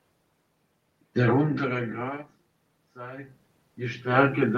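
Automatic gain rising from 2.96 s to the end of this speech clip at 4.58 s: after the input level drops by about 16 dB, the gain control slowly raises its gain, so the voice and the room noise swell together over roughly a second and a half. The talker also moves relative to the microphone around 1.5 s and again around 3 s.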